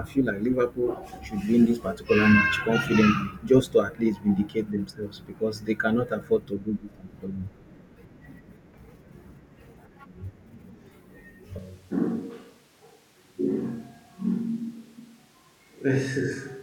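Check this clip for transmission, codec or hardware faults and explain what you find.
One fault is present: a switch to a distant microphone at 11.59 s, lasting to the end. The signal likely comes from a farther microphone after the close one dropped out. The speech abruptly turns roomy and hollow, thinner in bass, roughly 5 dB quieter, with more audible background noise.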